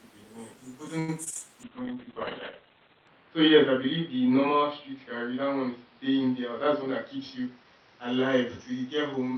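From 0.99 to 1.50 s the speech turns choppy, with pieces missing and short holes, the longest about 87 ms. This is repeated packet loss: packets kept going missing, each gap was patched by extending the previous sound, and more than a third of the span ended up concealed.

From 1.65 s to the end the speech becomes rough, watery and muffled, with the top end cut from 20 kHz down to 4 kHz. This is a call bitrate drop. The bandwidth estimate fell and the encoder coded more coarsely, which fits a fall from 32 to 6 kbps, and the lowest rate held for about 1.4 s.

Between 6.41 and 7.79 s the speech sounds hurried, running about 6% fast at unchanged pitch. This is a jitter buffer speed-up: too much audio had built up, so the receiver trimmed short pitch-period slices again and again, removing about a tenth of a second in total.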